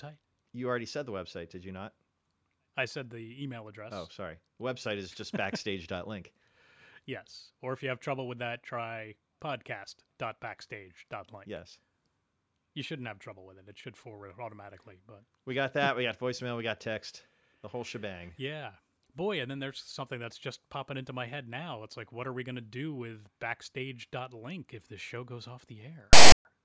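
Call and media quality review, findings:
File tags played as audio, 26.13 to 26.45 s. Hard-edged loud rasp, offset to one side, then silence. Decoder reading text tag block and zero padding as samples.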